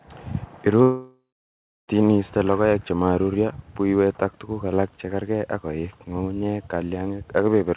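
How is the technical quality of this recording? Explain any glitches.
The speech has one clear interruption. From 0.82 to 1.9 s the sound smears into a fading buzz, then goes silent for roughly two thirds of a second before resuming at "iiste logoek chemaruryo buywet", with about 1.1 s lost. This is likely a long network dropout: the receiver stretched the last audio, then gave up. The narrow, 4 kHz-limited sound reflects the 64 kbps G.711 call path.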